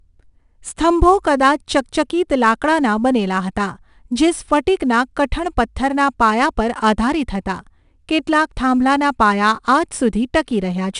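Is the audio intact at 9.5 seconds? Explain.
No, at 9.5 s the speech carries 4-bit ADPCM compression throughout: coarse predicted steps leave gritty hiss tracking loudness, a raised noise floor on the spectrogram, and nothing above 10.6 kHz.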